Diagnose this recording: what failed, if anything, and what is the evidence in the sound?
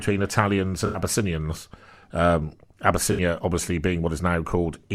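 AAC frame loss with concealment in the codec stage, at 0.86–0.99 s and 3.12–3.20 s. Gaps of about 85 ms and 64 ms fit four and three lost frames. The decoder refilled each from the last good spectrum, leaving a brief smeared, phasey patch in the speech.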